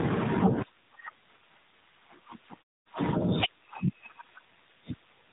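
From start to finish the speech has been through the AMR narrowband mobile codec, the old 2G/3G phone codec. Everything above about 3.8 kHz is gone, so sibilants lose their edge and the voice sounds boxed in. The codec rebuilds speech from a simple vocal-tract model fed by a few pulses, and the damage is plainly audible here: a buzzy, synthetic quality that fits one of the lower modes, around 7.4 kbps. The pauses go quiet, as the muting intends.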